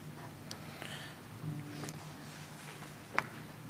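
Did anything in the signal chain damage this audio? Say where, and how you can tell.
Yes. The damage sits in the network stage, as short concealed packet loss at 1.91 to 1.95 s. There is a brief smear in the sound there. About 20 ms of audio never arrived in time for the decoder. The receiver covered roughly 14 ms of that gap by extending the preceding sound, then crossfaded back into the real signal. That extension is the smear you hear.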